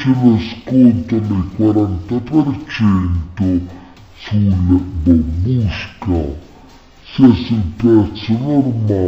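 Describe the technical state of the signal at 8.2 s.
At 8.2 s the signal suffers from stereo read as mono, a fault that runs through the whole clip. The left and right samples are interleaved, but they are being read in sequence as one channel. Each stereo frame therefore takes two sample periods instead of one. The sound plays at half speed and is pitched 12 semitones down, a full octave. A fainter mirrored copy of the sound also shows up in the upper half of the spectrum.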